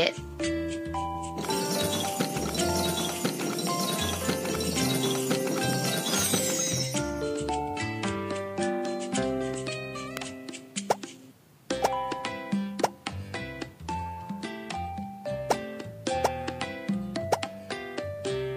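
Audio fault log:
5.73 s and 10.17 s: electrical switching spike. Two brief sharp snaps sit on top of the sound, the second roughly 10 dB louder. Likely a short electrical arc picked up by the line.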